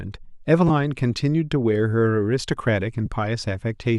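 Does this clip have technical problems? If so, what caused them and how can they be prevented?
Yes. Lost LE Audio frames briefly turn the speech into a hissy smear at 0.68–0.70 s, a 20 ms gap that fits two 10 ms frames, and at 3.06 s, which fits one. Unlike a dropout, there is no hard silence or click. The LC3 decoder fills each gap with the previous spectrum, signs randomised. Improving radio conditions or adding retransmission headroom prevents it.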